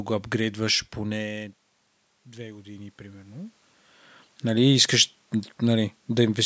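Automatic gain rising runs from 2.25 to 3.64 s. The input level had dropped by about 17 dB. The gain control responded by slowly raising its gain about 5 dB across those 1.4 seconds. Because the boost applies to everything at the microphone, the speech and the room noise beneath it swell together, giving a gradual lift in loudness and background noise rather than a sudden step.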